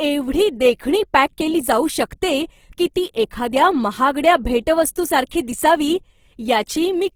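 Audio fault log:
throughout, Opus compression: a starved encoder, likely Opus in its music (CELT) mode at a rate that fits about 16 kbps, fills bands with folded or noise content, so the speech sounds plainly grainy and rough while the bandwidth still reaches about 20.3 kHz.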